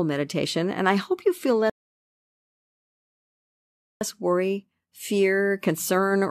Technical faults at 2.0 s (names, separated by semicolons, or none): rebuffering stall